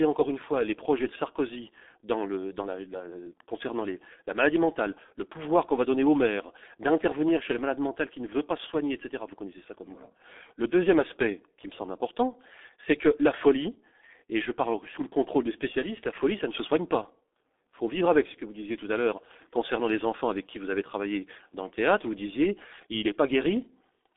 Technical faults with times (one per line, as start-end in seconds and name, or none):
0.00-24.16 G.723.1 codec